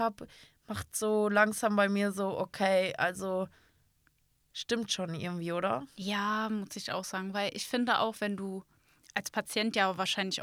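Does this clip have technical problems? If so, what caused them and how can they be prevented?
No, nothing in this speech recording points to a technical problem, so there is no cause to trace and nothing to prevent.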